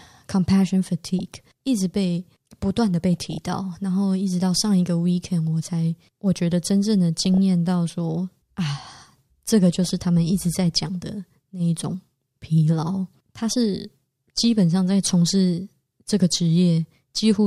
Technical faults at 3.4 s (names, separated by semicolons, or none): DAB burbling